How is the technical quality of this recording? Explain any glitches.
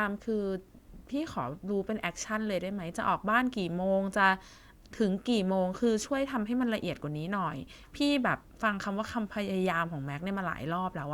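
The recording has no glitches to explain. Nothing interrupts or disturbs the speech at any point.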